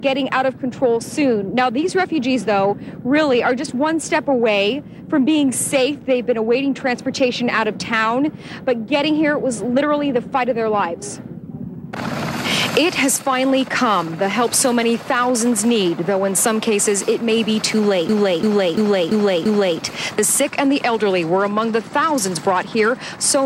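From 18.09 to 19.80 s a system hang loop occurs: the machine froze while the hardware kept replaying its ring buffer, so one 341 ms slice, fitting a 16384-sample buffer, repeats identically five times, a 2.93 Hz skipping-record repeat. Unlike a dropout, nothing falls silent.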